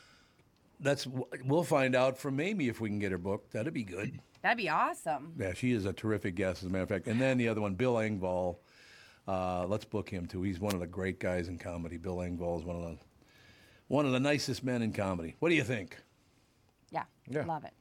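A brief burst of static swishes across the speech from 10.68 to 10.74 s, just before "of the great guys": a wireless microphone noise hit, where the FM radio signal faded and receiver noise surged through.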